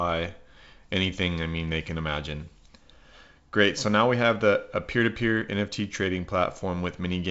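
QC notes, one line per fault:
No faults found in this speech.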